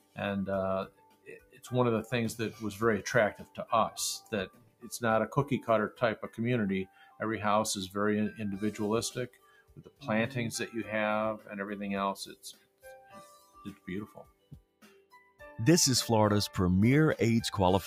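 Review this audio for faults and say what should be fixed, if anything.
Throughout the clip the level pumps and flutters. Held tones and decaying tails sink by a swing of roughly 15 dB while onsets punch through, so the sound thins out between attacks. This is a noise suppressor applied to music or sounds. A processor tuned for speech is treating sustained, steady material as background noise and pulling it down, which leaves the transients intact and drains the body and ambience from everything that follows them.

The sound is cut by the noise suppressor in eight separate stretches:
0.00–0.18 s (about 17 dB deepest drop)
0.85–1.67 s (about 18 dB)
3.33–3.66 s (about 15 dB)
4.20–4.88 s (about 18 dB)
5.90–6.39 s (about 12 dB)
6.85–7.21 s (about 11 dB)
9.27–10.07 s (about 18 dB)
12.22–15.41 s (about 18 dB)

The last stretch is the longest at roughly three seconds. In each one, sustained or fading sound was judged to be noise and attenuated harder than its surroundings, so the level sags and decays are truncated.

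To prevent this, bypass the speech noise suppressor, or switch it to a music mode, whenever non-speech audio is being captured or transmitted.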